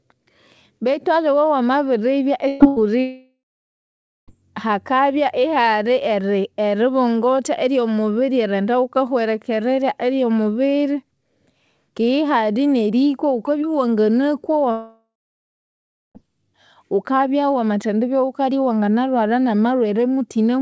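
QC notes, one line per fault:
2.48–2.63 s and 2.68–2.79 s, burst of packet loss: just after "aliwe wamabiribya", about 120 ms then 80 ms go missing. The receiver stretches the last sound and fades it, then skips ahead.
3.00–4.31 s, long network dropout: about 1.28 s is lost. A fading buzz or hiss gives way to about 0.88 s of silence, likely because no packets were arriving.
14.72–16.18 s, long network dropout: about 1.44 s is missing. The held sound fades, then about 1.04 s of silence follows before the audio resumes further on, likely from a packet-arrival gap.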